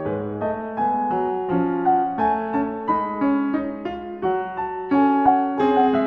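Listening through this music clip, nothing technically wrong stood out at any point.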